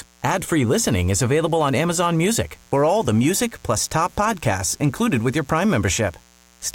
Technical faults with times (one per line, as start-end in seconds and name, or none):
0.00-6.75 mains buzz